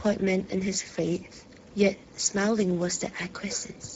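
Hoarse, grainy speech runs through the whole clip, with a plainly audible noisy roughness on every sound and nothing above 7.6 kHz. This is Speex codec damage. Speex is a CELP speech codec that rebuilds the voice from a predicted spectral envelope plus a coded excitation signal. The roughness suggests a low setting, around 10 kbps, where too few bits go to the excitation.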